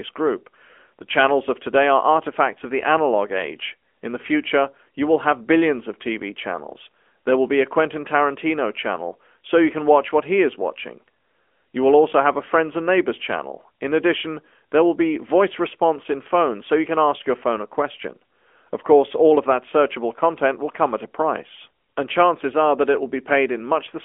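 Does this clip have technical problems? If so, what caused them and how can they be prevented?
Yes. The whole clip has gone through an AMR narrowband mobile codec, the old 2G/3G phone speech coder. Everything above about 3.6 kHz is gone and the low end rolls off near 200 Hz, giving that boxed-in 200 Hz to 3.4 kHz phone-line band. The codec models speech with a few pulses per short frame, and the buzzy, synthetic edge you can plainly hear fits one of its higher modes, around 10 kbps. To prevent it, record locally or use a wideband link instead of a narrowband phone call.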